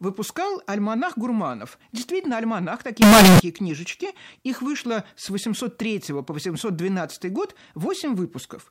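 From 3.02 s to 3.40 s the speech turns abruptly into a loud, harsh, buzzing block of sound, with the background noise brought up to the same level as the speech, though the pitch contour can still be followed. The likely cause is a float read as integer: 32-bit float samples interpreted as 32-bit integers, so each sample's sign and exponent bits dominate and the waveform flattens into a near-square shape at an almost fixed, high level.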